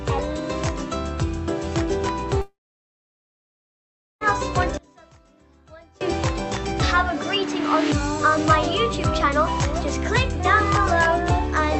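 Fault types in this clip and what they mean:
Long network dropout: From 2.41 to 4.23 s the sound breaks off. The last moment is stretched into a short fading buzz, and then about 1.7 s of near-silence follows before the audio resumes further along, with roughly 1.8 s of material simply gone. This is most likely a run of packets that never reached the receiver, so its concealment could only smear the final sound briefly before giving up.
One channel inverted: Between 4.77 and 6.01 s the level drops by about 28 dB, leaving only a faint residue of the sound. The likely cause is one stereo channel with its polarity reversed over that span. When the channels are summed to mono, everything common to both cancels, and only the small difference between them survives, which is why the content nearly vanishes rather than just getting quieter.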